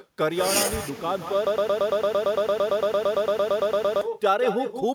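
Echo with no canceller runs through the whole speech clip. A quieter copy of the talker trails each phrase by about a fifth of a second, sitting about 9 dB below the direct sound and coming across thinner. The far end is playing the call through a loudspeaker, and its microphone is catching that playback and sending it back over the network. Nothing there is subtracting it, so every syllable gets its own delayed shadow.

A broken-record loop starts at 1.47 s and holds until 4.01 s. One fragment about 113 ms long plays 22 times back to back with no variation, which produces a rapid mechanical stutter in place of continuing speech. The likely cause is a stall in the player, encoder or stream that kept resending the last chunk it held. Whatever should have been heard across those two and a half seconds never arrives.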